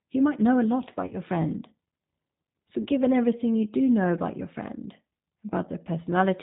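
Throughout, the speech passes through a low-bitrate G.729 codec that rebuilds it from a vocal tract filter, pitch predictor and few pulses, fitting 8 kbit/s; the sound is plainly rough and synthetic, with nothing above 4 kHz. At 1.07 to 1.15 s and again at 2.82 to 2.87 s, VoIP packet loss concealed by the speech codec takes over. About 40 ms goes missing each time, which fits two lost packets, and the decoder stretches its last pitch and filter into a fading buzzy tone or coloured noise.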